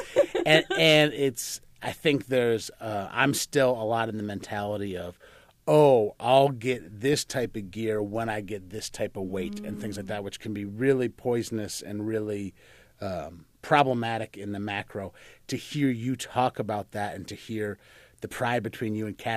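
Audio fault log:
0.51–1.00 s, hard clipping. The speech runs about 3 dB past full scale just before "it's I think there's". Flattened peaks add a crackly edge.
7.13 s, DAB burbling. Just before "type of gear when", a few brief watery blips come from a low rate of bit errors slipping past error correction. Wrong samples put short blips of noise in single sub-bands across what sounds like a few frames.
13.76–13.80 s, hard clipping. Between "poisonous and really um" and "in the macro", peaks overshoot by about 2 dB. They are cut flat, giving a short crackle.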